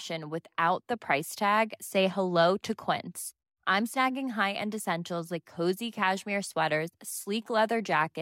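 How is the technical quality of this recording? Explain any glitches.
The technical quality of the recording is sound, and there are no glitches to explain.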